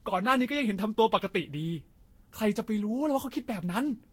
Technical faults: generation loss

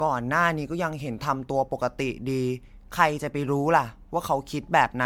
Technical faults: generation loss

